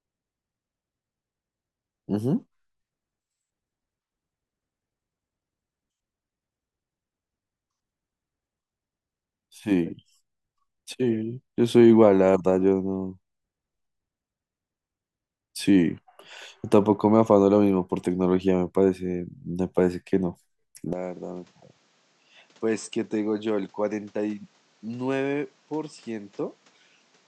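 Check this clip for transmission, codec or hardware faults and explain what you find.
One fault is present. Input switched to a poorer device, from 20.93 s to the end: with no gap, the speech abruptly turns duller and loses everything above 8.3 kHz, drops roughly 10 dB and gains a new background noise about 30 dB down, likely because capture moved to a narrower-band microphone.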